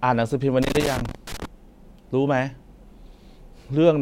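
A worn or dirty contact in the signal path, a loose connector crackle, was making and breaking from 0.63 s to 1.45 s. Each time the contact opened, the speech signal was cut off for an instant, and any DC sitting on the line jumped as contact returned, adding pops. Over those eight-tenths of a second the speech is broken up by an irregular, scratchy burst of crackle.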